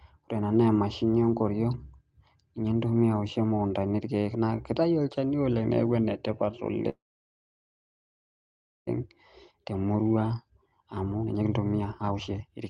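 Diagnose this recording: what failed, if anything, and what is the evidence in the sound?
Network stage, likely a stall in packet delivery: the jitter buffer ran dry and the receiver had nothing new to play. Right after "olchani oleng niaku enetipat", from 6.89 s to 8.89 s, the speech stops and a call audio freeze fills the gap. A brief continuation of the last sound fades, then about 1.89 s of silence. When packets resume, the speech picks up where it left off, so nothing is lost, but playback now runs about 1.98 s later.

Buffer stage, a jitter buffer speed-up: the delayed audio arrived in a bunch, overfilling the buffer, and the receiver worked the excess down by repeatedly cutting out short pitch-period-length slices. From 9.36 s to 12.5 s the speech plays at about 131% of normal rate with its pitch unchanged, shedding around a second of audio in total. The result sounds hurried, as the playback catches back up to its target latency.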